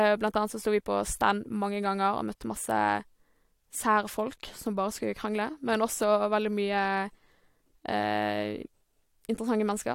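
Speech recording with no audible technical faults.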